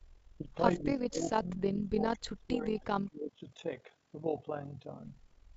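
From the very start there's overlap-add ripple running the whole way through: the frames were stitched back together with an overlap that doesn't sum flat, so the level pumps by about 11 dB at roughly 40 Hz. You hear it as a gritty, rough tremolo riding on the speech.

Then from 0.80 to 3.42 s the speech gets chopped down, dropping by as much as about 35 dB in patches that add up to roughly two seconds. That's most likely speech suppressed in double talk, with the echo canceller mistaking overlapping far-end talk for echo and ducking the near talker along with it. The call mic's normal high-pass filtering, which takes out the lowest bass, sits underneath all of this.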